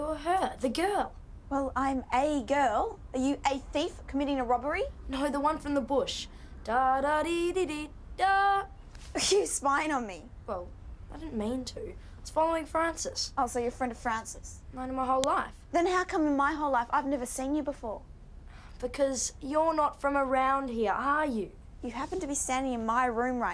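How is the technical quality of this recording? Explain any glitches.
One glitch stands out. At 15.24 s, a file header is played as audio: leftover bytes from a joined segment's header play as samples, giving a sharp click unrelated to the surrounding sound, unlike a signal dropout.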